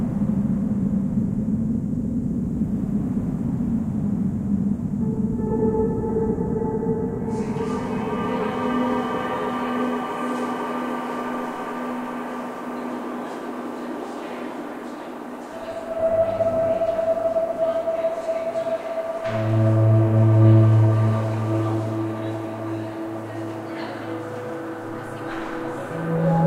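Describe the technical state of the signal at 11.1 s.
At 11.1 s the signal is intact, with no technical fault present at that moment.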